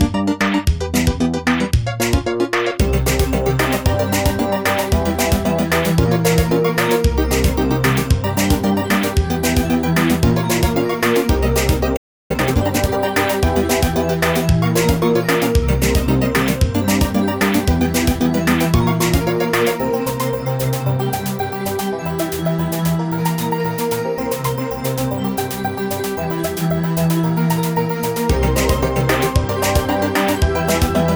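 At 11.96 s a playback stall silences the sound for about 0.33 s, most likely because the player's buffer ran dry, before it resumes at 12.31 s. From 12.31 to 12.97 s a time-compressed catch-up runs the audio at 1.5 times speed, hurried but at normal pitch.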